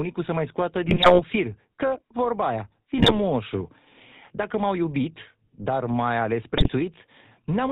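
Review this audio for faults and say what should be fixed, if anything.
The whole clip carries GSM full-rate codec coloring: buzzy, gravelly speech with nothing above 4 kHz, consistent with the 13 kbps pulse-excited vocal-tract model.

There are GSM bit errors at 0.85–1.22 s, 2.98–3.18 s and 6.54–6.70 s. Corrupted filter, pitch or gain values produce squawks, pops and gargling bursts.

Re-record or source the audio over a wideband path with a strong, clean link rather than a degraded GSM call.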